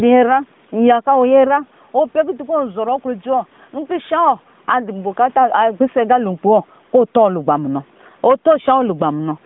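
Gain pumping runs through the whole clip, likely from input gain set far too high with a fast limiter clamping each loud syllable, so the gain swings by around 10 dB. From 8.29 to 8.72 s, hard clipping appears as the peaks overdrive a stage by about 4 dB and are sliced flat, adding crackle on the peaks of the loud speech.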